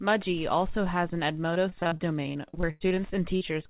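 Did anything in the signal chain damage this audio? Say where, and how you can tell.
Yes. In the analogue wiring, the whole clip carries Wi-Fi interference: a steady ticking about ten times a second, at a period of 102.4 ms, sitting roughly 30 dB below the speech. That spacing matches a Wi-Fi beacon interval. A nearby radio's bursts are being picked up by the audio circuit and rectified into audible clicks, so the damage happens before any digital stage and persists regardless of what the network does.

On the network side, from 1.54 s to 2.98 s, starting just after "also has an", there is repeated packet loss with a robotic sound. The speech turns choppy, with pieces missing, across roughly fourteen separate holes, the longest about 98 ms. About a quarter of that stretch is synthetic fill, about 360 ms in total. The jitter buffer keeps extending the last received sound into each hole, and the next one arrives before normal audio can settle.

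There is another network fault at 3.36 to 3.43 s: a short concealed packet loss lasting about 40 ms. It is heard as a brief smear where the receiver extended the preceding sound and then crossfaded back into the real signal. Because it is a single short event rather than a run, it comes across as a momentary wobble, not the robotic texture of the earlier stretch. The call path's band-limit at 4 kHz, consistent with a G.711 mu-law codec, is audible throughout.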